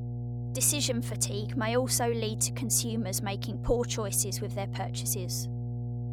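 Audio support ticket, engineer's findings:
Mains hum, whole clip: steady 60 Hz tone plus low harmonics, loud, nearly level with the speech. Likely ground loop or nearby transformer coupling power line into signal path.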